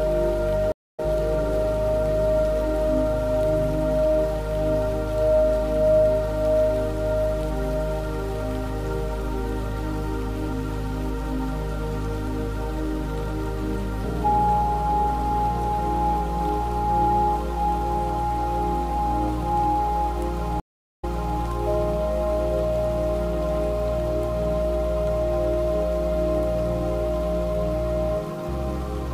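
Audio drops out for about 0.21 s at 0.72 s, skipping roughly 0.2 s ahead, and for 0.40 s at 20.6 s, replaying 0.37 s. These are stream reconnects restarting decoding mid-stream.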